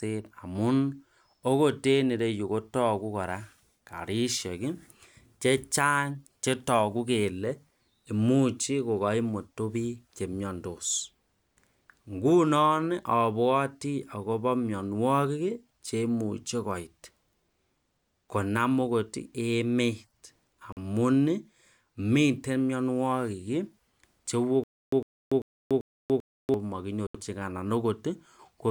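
At 20.72 s the speech drops to silence for 45 ms, then resumes: a Bluetooth stall, likely the headphone buffer running dry while interference delayed packets. From 24.64 to 26.54 s there's stutter with silent gaps, likely a stalled stream retrying: a 103 ms fragment repeats four times, separated by 288 ms of dead silence. Another Bluetooth stall follows at 27.07 s, going silent for 77 ms.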